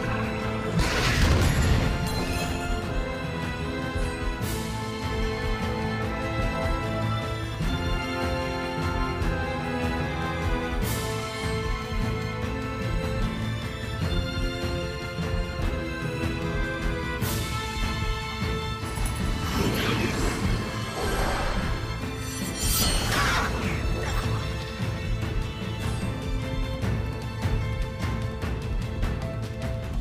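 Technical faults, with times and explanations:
No technical faults can be heard anywhere in this audio. There is nothing to list.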